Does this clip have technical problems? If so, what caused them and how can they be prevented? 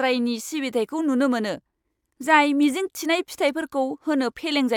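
No, nothing stood out as a technical problem when listening to this speech clip, so there is nothing to trace back or prevent.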